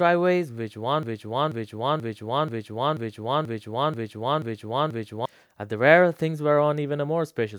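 From 1.03 s to 5.26 s the speech falls into a broken-record loop: a single fragment of about 0.48 s plays nine times in a row, each pass identical, until normal speech resumes. The cause is likely a stall in the player, encoder or stream that kept resending the last buffered piece. Unlike an echo, the repeats don't decay or overlap, and unlike short jitter stutters, they run for over four seconds while the speech meant for that span is lost.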